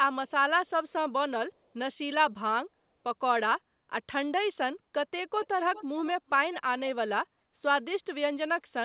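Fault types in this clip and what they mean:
Echo leak: a faint copy of the speech trailing it by 390 ms and roughly 20 dB quieter, heard from 5.42 to 5.85 s and briefly at 6.52 to 6.56 s, likely loudspeaker pickup at the far end that the echo canceller failed to remove.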